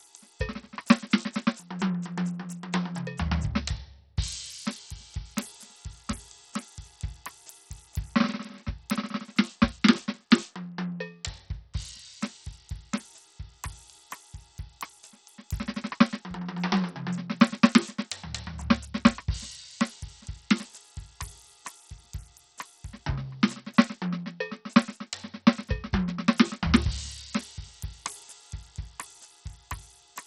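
Throughout the music, treble flickers and vanishes above 17 kHz under gritty, aliased noise, likely Bluetooth SBC compression starved of bits, which fits roughly 64 kbps.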